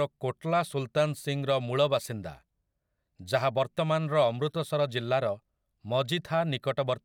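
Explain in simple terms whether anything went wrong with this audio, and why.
Nothing went wrong here: the speech runs uninterrupted with no audible fault at any point.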